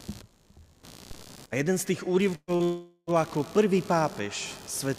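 Computer activity noise runs through the whole clip: a buzzy pulsing at around 70 Hz, roughly 25 dB below the signal. It comes from processor, graphics or mouse load currents disturbing the audio circuit's shared ground, so it follows the machine's activity rather than the sound.

At 1.11 s a DC step shifts the waveform's zero line abruptly. It is heard as a low thump while the audio carries on unchanged. The offset then drains away as a highpass near 5 Hz pulls the baseline back to zero.

From 2.35 to 2.51 s a burst of packet loss removes about 120 ms. The receiver extends the last sound for about 121 ms, fading it into a held buzz or hiss, and leaves about 40 ms near-silent before the audio resumes further along.

At 2.56 to 2.62 s a short concealed packet loss follows. About 40 ms never arrived and was patched by continuing the preceding sound, then blended back. It is heard as a brief smear or wobble.

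From 2.63 to 3.1 s the sound carries on as a synthetic buzz or hiss that dies away over about 436 ms, with roughly 50 ms of silence. About 440 ms of material is skipped when the audio returns, which is likely a long network dropout.

A second DC step lands at the very end, at 4.98 s. It produces another low thump as the baseline jumps, with the same slow highpass decay near 5 Hz.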